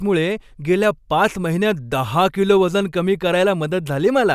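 No technical faults are audible.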